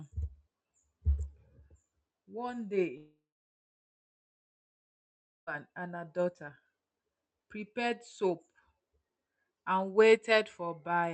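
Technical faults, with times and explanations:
2.97 to 5.49 s, long network dropout: packets likely stopped arriving for about 2.5 s, so the receiver stretched the last sound into a brief fading buzz, leaving roughly 2.2 s of silence before audio resumes at "and her daughter", with the missing stretch never recovered.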